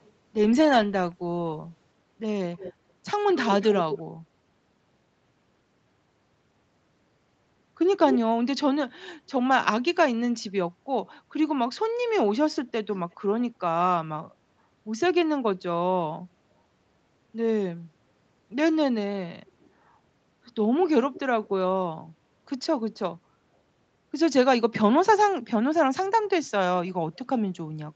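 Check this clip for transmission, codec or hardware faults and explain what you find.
One recurring fault stands out: brief echo leak in seven places.

At 0.01–0.11, 2.54–2.73, 3.27–4.01, 8.09–8.19, 12.93–13.15, 19.46–19.70 and 21.13–21.20 s, a delayed copy of the speech trails the original by roughly 220 to 280 ms. It varies from barely audible, around 35 dB down, to nearly as loud as the speech, around 5 dB down, with the longest stretch near 3.3–4.0 s. The likely cause is a loudspeaker on the far end whose echo canceller let part of the returning sound through.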